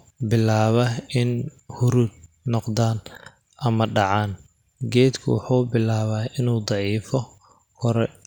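No technical faults are audible.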